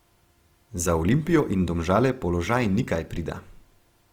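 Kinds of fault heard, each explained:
Opus compression: throughout, the speech sounds plainly grainy, likely from Opus CELT coding filling starved bands with folded or noisy content, which fits 24 kbps.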